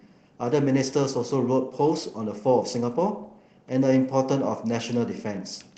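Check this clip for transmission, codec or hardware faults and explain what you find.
No transmission, codec or hardware faults.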